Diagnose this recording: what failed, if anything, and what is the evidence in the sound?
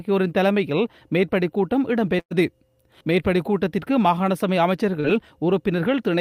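From 2.19 to 2.33 s the sound is held and fades out, then jumps ahead. This is a burst of packet loss on the network: about 120 ms never arrived, the receiver extended the last sound for roughly 110 ms while turning it down, and the material in between is gone.

Around 5.01 to 5.06 s there is a brief smear where the sound wobbles and blends back in. This is short concealed packet loss on the network path: about 40 ms went missing, and the decoder synthesised about 33 ms of continuation from the preceding sound to cover it.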